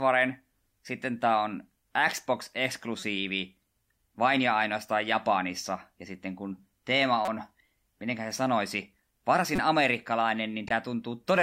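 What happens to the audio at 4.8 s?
Nothing goes wrong at 4.8 s; the speech continues intact through that moment.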